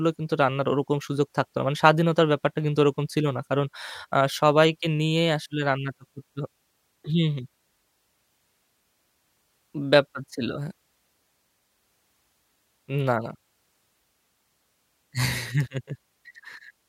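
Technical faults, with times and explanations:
Nothing technical to flag here; the speech comes across without any faults worth noting.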